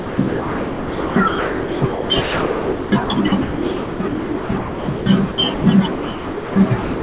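From 0.0 to 5.06 s and again from 5.32 to 5.64 s, the sound is chopped by the voice detector. Quiet stretches, close to 4 s in the first span, are replaced by comfort noise. The likely cause is a sender-side detector that repeatedly switches transmission on and off.

The sound is dropped by the voice detector from 5.92 to 6.56 s and from 6.82 s to the end. Here the sound simply gives way to steady comfort noise for about 0.64 s and 0.2 s. This is likely the detector mistaking quiet sound for background. The gaps are single, unbroken ones rather than the repeated holes of the earlier spans.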